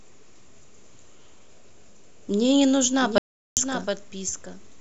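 At 3.01 s a doubled audio track begins and runs to the end of the clip. A second copy of the speech enters abruptly. It trails the original by roughly 0.7 s and sits about 5 dB quieter. It is full-band and dry, with no decay or room colour. This likely comes from the signal being captured twice, once through a slower path, or from an edit leaving two copies out of step. The result sounds like a flat echo.

From 3.18 s to 3.57 s comes an audio dropout to silence. The speech cuts out mid-flow and then returns. The gap lasts about 0.39 s. It is silent, with no room tone underneath. Whatever was spoken in that span is lost. The likely cause is a brief loss of input, such as a disconnected device, a failed link or a stray mute, while the recorder kept writing silence.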